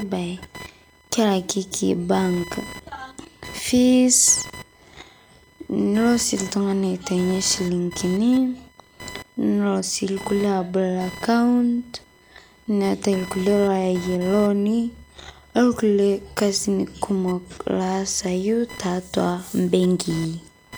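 Speech recording with computer activity noise present throughout. A whine-like buzz pulsing at around 1 kHz sits roughly 20 dB below the speech and stays independent of it, continuing through pauses as well as spoken passages. The pattern points to load changes in the processor, graphics card or mouse disturbing a ground shared with the audio circuitry, so that digital switching currents leak into the analogue signal path as an audible buzzing or chirping texture.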